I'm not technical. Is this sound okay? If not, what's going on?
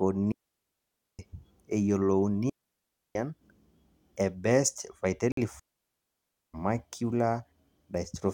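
No. The speech has three digital wireless dropouts, from 0.32 to 1.19 s, 2.50 to 3.15 s and 5.59 to 6.54 s, each lasting over half a second. The wireless receiver lost too much signal and muted itself, leaving clean, near-silent holes with no hiss or crackle around them.

At 5.32 s there is a much shorter gap of about 0.05 s, likely a Bluetooth stall. The headphones briefly ran out of sound while waiting for delayed data, then carried on, rather than muting for a long stretch.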